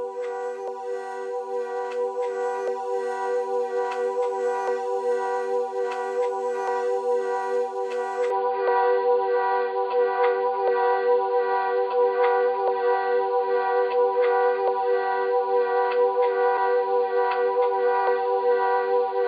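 From 8.30 s to the end, the sound abruptly turns dull and boxy, with nothing above 4.8 kHz. There is no gap at the change, but the level shifts by a few decibels and a faint new background hiss appears well beneath the sound. This is likely an input switched to a poorer device mid-recording: a second microphone or headset path with a narrower band, its own colouration and its own noise floor took over.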